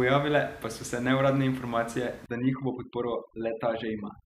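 From 2.26 s to the end of the clip, overdone noise removal takes hold. A noise reducer set far too strong is cutting individual frequency bands whenever they come close to its noise estimate. Room noise sits about 21 dB below the speech before this point. After it, the background drops and breaks up into twinkling specks. Quieter parts of the speech are removed too.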